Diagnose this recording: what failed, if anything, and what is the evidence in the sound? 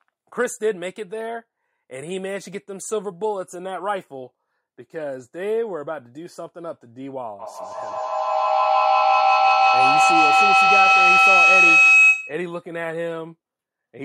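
A feedback howl develops in the call path from 7.39 to 12.53 s: a second device in the room replays the audio into the microphone with gain above unity, so each pass grows. A spectrogram shows a bright line near 3 kHz, pulsing about every 150 ms, and the waveform envelope swells to about 12 dB above the speech.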